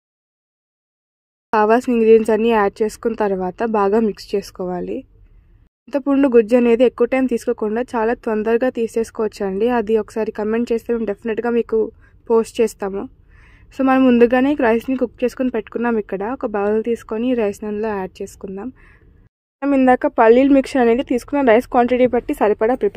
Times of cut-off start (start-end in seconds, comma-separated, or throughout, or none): 0.00-1.53